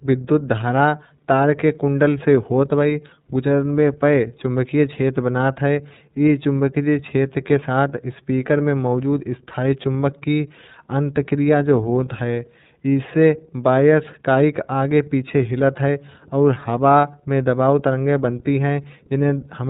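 Speech throughout sounds band-limited below 4 kHz, plainly rough and synthetic: iLBC codec damage, its independently coded frames fitting 13.33 kbps iLBC with 30 ms frames.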